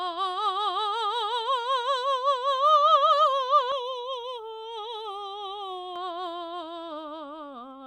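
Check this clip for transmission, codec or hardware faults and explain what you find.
One fault is present. From 3.72 to 5.96 s, channel delay causes comb filtering. One channel lags by roughly a third of a millisecond. Mono summing cancels evenly spaced frequencies, starting near 1.5 kHz, so the music turns hollow and phasey.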